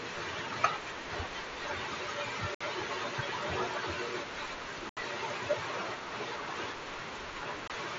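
At 2.55 to 2.61 s, 4.89 to 4.97 s and 7.68 to 7.70 s the speech drops out in three holes of 60 ms, 75 ms and 22.5 ms. This is unconcealed Bluetooth headset packet loss. Voice packets between headset and phone went missing and nothing filled the gaps, so each hole has abrupt edges that can click. The lengths fit runs of 7.5 ms frames on the mSBC wideband link, whose light graininess sits on loud sounds.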